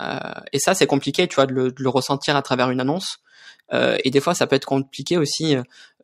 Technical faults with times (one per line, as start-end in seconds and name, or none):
none